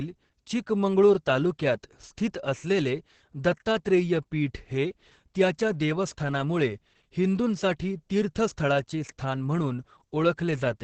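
Throughout, Opus voice compression running its SILK coder in wideband mode at a bitrate that sounds near 10 kbps cuts everything above 8.5 kHz, leaving the speech muffled, hoarse and robotic.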